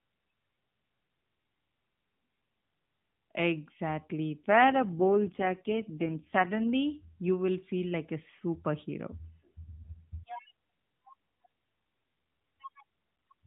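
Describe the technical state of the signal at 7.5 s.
At 7.5 s the speech is intact, with no dropout, click or other fault, only the narrowband sound of the AMR mobile codec carrying it.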